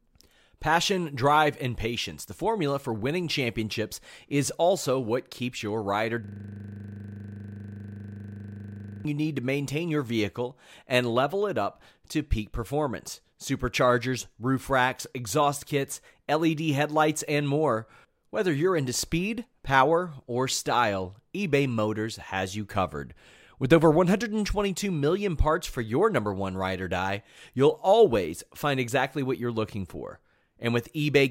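Speech, with a system hang loop from 6.24 to 9.05 s: one 40 ms slice repeats dozens of times at 25 Hz, giving a rough, buzzing stutter. The system stalled while the sound hardware kept cycling its ring buffer, which fits a 40 ms buffer.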